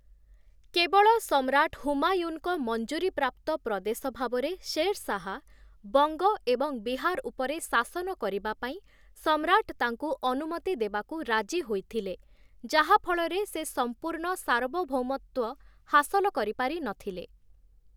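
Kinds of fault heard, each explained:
No faults can be heard in this recording.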